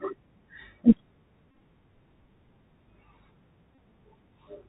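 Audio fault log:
throughout: Bluetooth CVSD headset codec. The speech sounds boxed-in, with nothing above 4 kHz, a scratchy edge on s sounds and a grainy hiss underneath. This fits 64 kbps CVSD, where a one-bit up/down step cannot keep up with fast high-frequency detail.
1.51–1.61 s and 3.75–3.78 s: Bluetooth headset packet repeated. Brief buzzy patches near 267 Hz appear here, first broken up over about 98 ms with the longest stretch around 20 ms, then a tighter 26 ms burst. Lost packets were replaced by re-decoding the previous one every 3.75 ms.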